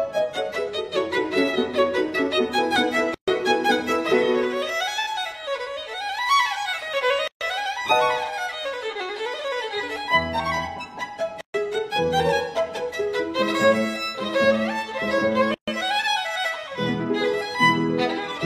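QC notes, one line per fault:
3.14, 7.28, 11.41 and 15.54 s: gap at a join of encoded pieces, about 133 ms each, so the sound drops out, then resumes where it stopped. It recurs roughly every 4 s, which fits separately encoded chunks joined with their start delay and end padding left in.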